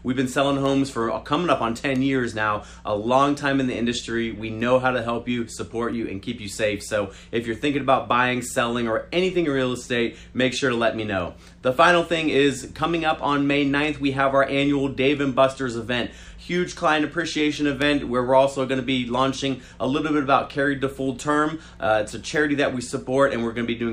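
No technical faults can be heard anywhere in the clip.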